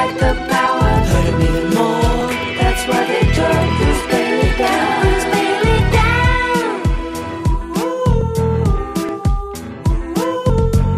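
There are six little skips, at 0.66, 2.21, 3.96, 8.21, 9.09 and 10.50 s. Each is the sound jumping forward, no gap of silence. That's most likely a dropped buffer (overrun): audio got overwritten before it was read, and the ends were butted together. The first five lose around 10 ms each. The one at 10.50 s loses roughly three times that.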